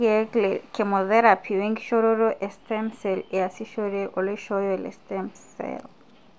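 Listening to the speech recording, nothing stood out as a technical problem.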